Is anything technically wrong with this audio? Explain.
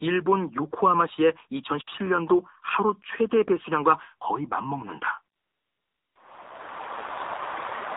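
Yes, two things. The whole clip has gone through the AMR narrowband mobile codec, and there's a stretch of AMR comfort noise near the end.

The codec damage is plainly audible from start to finish. Everything is squeezed down to an 8 kHz sample rate, so nothing above 4 kHz survives, and the voice sounds muffled and phone-like. The encoder rebuilds the voice from a vocal-tract model excited by a handful of pulses per short sub-frame. With few bits to spend, that comes out buzzy and a bit synthetic, which fits a low mode around 7.4 kbps.

From about 5.36 to 6.16 s, roughly 0.8 s, the real signal drops out and you get AMR comfort noise instead. The phone decided nobody was talking and stopped sending speech frames. The receiver then filled the gap with a smooth, steady hiss made up from a rough sketch of the background's level and spectrum. You can hear it switch in and out at the edges, with the genuine background swapped for that bland noise bed.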